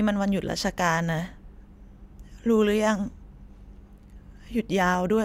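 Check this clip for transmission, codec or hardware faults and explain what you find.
I checked the clip and found no faults to explain.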